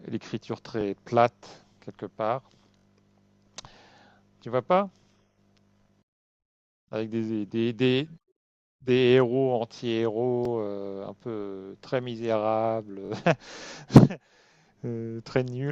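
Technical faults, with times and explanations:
0.81–0.83 s, 2.77–2.84 s, 10.45–10.48 s, 13.06–13.10 s: repeated buffer. A piece of about 21 ms, which fits a 1024-sample buffer, replays one to three extra times, heard as a brief stutter. The waveform shows identical segments with hard joins, and the spectrogram shows thin vertical lines at each seam.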